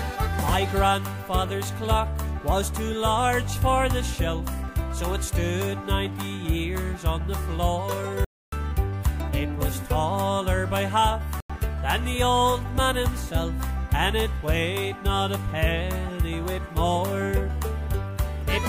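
At 8.24 s the sound drops into dead silence until 8.53 s, then again from 11.40 to 11.50 s. That's corrupt frame muted: damaged compressed frames got rejected and silence filled in. The first gap looks like four frames, the second one, and timing stays intact.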